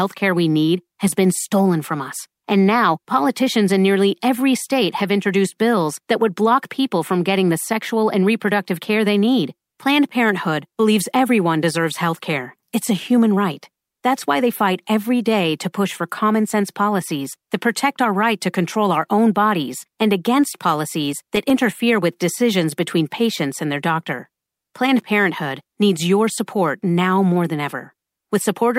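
At 21.36 s, right after "bodies and against policies", the speech breaks into loose connector crackle lasting about 0.15 s, ending before "with decisions between patients". A worn or dirty contact in the cable or jack keeps making and breaking, so the signal is chopped into fragments, heard as a short, irregular scratchy burst. On a waveform it shows as jagged gaps and sharp spikes; a spectrogram shows broadband vertical streaks across the burst.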